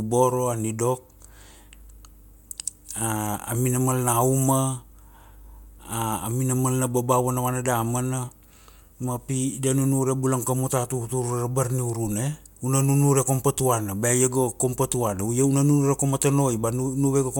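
No faults turn up anywhere in this speech recording, so there's nothing to flag from the first moment to the last.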